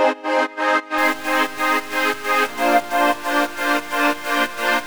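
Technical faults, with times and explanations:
0.98 s to the end at 4.86 s, stuck bit: from here the sound turns harsh and buzzy, and the quiet gaps fill with noise. That's likely one data bit jammed, pushing about half the samples off by a step of roughly -30 dBFS.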